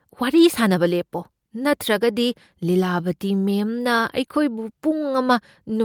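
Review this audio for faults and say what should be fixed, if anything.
Nothing stood out on listening to this speech recording, so nothing needs fixing.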